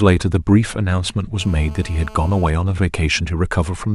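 GSM phone buzz runs from 1.41 s to 2.50 s in this speech recording. A 2G handset close to the audio chain was transmitting its radio bursts about 217 times a second, and some stage of the circuitry demodulated those pulses into the signal path. The result is a harsh, raspy buzz at 217 Hz, rich in harmonics and unrelated to the speech, sitting about 23 dB below it. Because the phone was on a call, the buzz holds steady rather than stuttering.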